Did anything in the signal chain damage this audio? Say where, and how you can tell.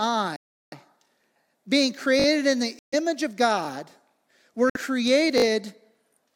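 Yes. At the wireless playback link there are three dropouts where the sound cuts to silence and then resumes where it stopped: 0.36 to 0.74 s (about 0.36 s of silence), 2.79 to 2.94 s (about 0.14 s) and 4.70 to 4.76 s (about 56 ms). This is a Bluetooth stall, likely caused by interference holding up packets until the headphone buffer emptied. It differs from a repeated buffer because the gaps contain true silence, not reused audio.

The driver or buffer stage shows a repeated buffer at 2.20 to 2.26 s and again at 5.38 to 5.44 s. In each case a single 20 ms piece plays four times in a row, three extra plays with hard joins, and then the sound continues with nothing lost. The fast 50-per-second repetition comes across as a short stutter or buzz. This is the device replaying its last buffer when new audio arrived late. It differs from a stall because the sound never goes silent.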